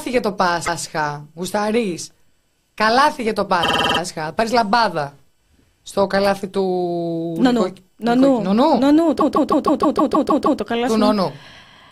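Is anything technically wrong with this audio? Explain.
Yes. There are repeated frames. A stretch of compressed audio is decoded again, so the speech stutters and runs longer. At 0.64–0.80 s, a 157 ms block plays twice. At 3.62–3.99 s, a 52 ms block plays seven extra times, like a rapid judder. At 9.18–10.59 s, a 157 ms block loops nine extra times, adding about 1.4 s.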